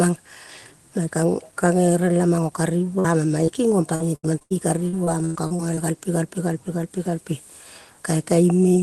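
At 2.99 to 3.06 s, a burst of packet loss: the receiver stretches the last sound for about 47 ms, fading it, then jumps ahead past roughly 40 ms of missing speech. This is a single longer hold rather than a flicker. At 3.46 to 3.49 s, a short concealed packet loss leaves only a brief smear or wobble, too short to sound like a held buzz. From 3.95 to 4.52 s and again from 4.88 to 5.78 s, repeated packet loss gives a choppy, robotic sound. The first stretch has four patched gaps, the longest 78 ms. The second has six, the longest 103 ms. What sets this apart is the rapid succession of holes breaking up the flow, not one isolated dropout. Throughout, the Opus call path's coding leaves the top end stopping near 12 kHz.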